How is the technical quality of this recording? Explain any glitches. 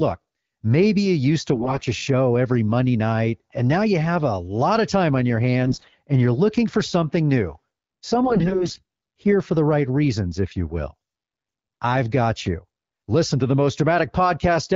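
The recording is wideband phone-call speech carried by the AMR-WB (HD Voice) codec, with clear speech and only light codec colouring that fits a 12.65 kbit/s mode. There are three short glitches.

AMR bit errors occur at 1.54 to 1.82 s, after "maybe you used to" and before "a show every"; at 5.62 to 5.95 s, after "of time on your" and before "and you're looking for"; and at 8.24 to 8.82 s, just before "here for the right". A weak radio link flipped the less protected bits in those frames, but the checksum on the critical bits still passed, so the decoder used them. The excitation pulses landed in the wrong positions, and the fine pitch, gain and spectral values were off. The voice keeps roughly its pitch and level but turns hoarse, scratchy and gargly, with the third stretch lasting longest.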